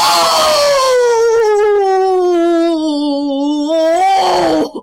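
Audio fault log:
0.46–4.23 s, word clock ticks: about five sharp, uneven ticks, roughly one per second, as an unlocked receiving clock around 20 ppm off drops or repeats a sample each time.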